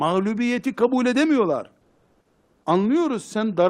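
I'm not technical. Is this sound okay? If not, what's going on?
No. From 1.81 s to 2.63 s, right after "kabul edemiyorlar", the real background in the pause is replaced by comfort noise: a flat, even hiss with none of the original room detail, and at a slightly different level than before. It lasts about 0.8 s, until the talking resumes. The likely cause is the sending app switching off transmission during the silence to save data and the receiver filling the gap with made-up noise, which fits Opus DTX.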